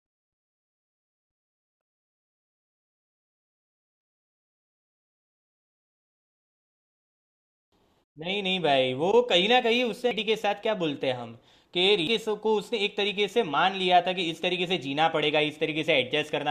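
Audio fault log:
7.72 s, 10.11 s and 12.07 s: damaged data in a compressed stream. Each is a brief chirp or blip in the speech. Corrupted bytes make the decoder misread those frames, lose sync and hunt for the next valid frame header.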